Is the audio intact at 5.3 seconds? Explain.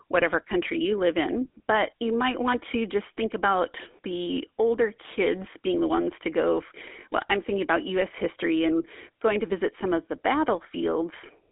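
No. At 5.3 s, as across the whole clip, the speech carries GSM full-rate codec damage. The codec rebuilds the voice from a vocal-tract model driven by sparse regular pulses, giving a plainly audible buzzy, gravelly roughness. The line band runs roughly 250 Hz to 3.5 kHz, with nothing above 3.8 kHz.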